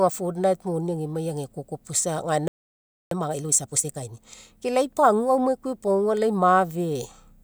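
At 2.48 s the speech just drops out and stays silent until 3.11 s, a gap of about 0.63 s, which is a playback stall. It sounds like the stream froze mid-flow rather than a natural pause, because the sound cuts off abruptly instead of trailing off. The likely cause is the player running dry of buffered data, or its playback thread getting blocked, so nothing reached the output until it recovered.

Right after the stall, from 3.11 to 4.37 s, you get time-compressed catch-up. The player is working off the backlog that built up during the gap, running at 1.5 times normal speed by snipping out tiny slices and cross-fading the joins. Pitch stays where it should be, so it doesn't sound chipmunky, just rushed, until things settle at 4.37 s.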